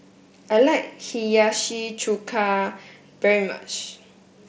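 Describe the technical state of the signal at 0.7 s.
At 0.7 s the speech is intact, with no fault, carried through the Bluetooth mSBC headset codec at its normal wideband limit of 8 kHz.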